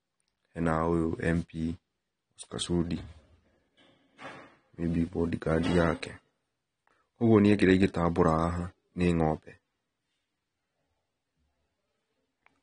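From start to finish the speech sounds dull and smeared, with a watery, fizzy edge on sibilants and nothing above 9.8 kHz. This is plainly audible AAC compression, likely AAC-LC at a low rate that fits roughly 32 kbps, which lowered the cut-off and thinned the coded spectrum.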